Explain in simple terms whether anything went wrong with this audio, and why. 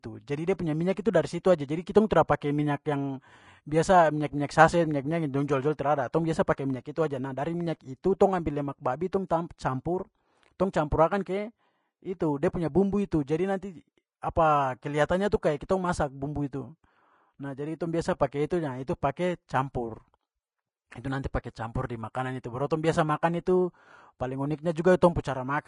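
The speech carries plainly audible compression damage from start to finish, most likely from Vorbis compression at a low quality setting. Nothing is heard above about 10.5 kHz, so the top of the sound is cut off and it seems dull. Below that, the encoder stored the fine high detail so crudely that it turned into a grainy hiss. That hiss roughens the voice and smears the starts of sounds.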